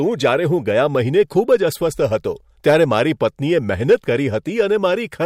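A speech recording with hard clipping in three places: 1.20 to 1.55 s, 2.68 to 3.01 s, and a brief burst at 3.90 to 3.94 s. In each, the level drives about 2 to 3 dB past what a stage in the chain can pass, so the waveform peaks are sheared flat. Those flattened tops add high-order harmonics, heard as a gritty crackle riding on the loudest moments rather than a continuous fuzz.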